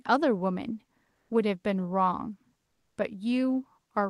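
Comfort noise in place of the background runs from 1.13 to 1.29 s, about 160 ms of the pause between speech. There the real background, sitting about 52 dB below the loudest speech, gives way to a flat, featureless hiss whose level shifts by about 5 dB. The likely cause is Opus discontinuous transmission: the sender stopped coding during the pause and the receiver synthesised a rough noise estimate, within the 12 kHz-limited call audio.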